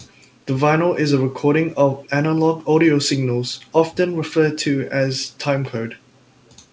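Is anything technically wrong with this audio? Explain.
Yes. There is an echo leak at 2.03 to 2.09 s and again at 6.46 to 6.52 s. In each, a faint delayed copy of the speech arrives about 456 ms after the original, roughly 35 to 40 dB below it, so it registers as a brief ghost. The likely cause is a far-end loudspeaker whose echo canceller let some microphone pickup through and sent it back. The band-limited sound, with nothing above 8 kHz, fits the G.722 call path.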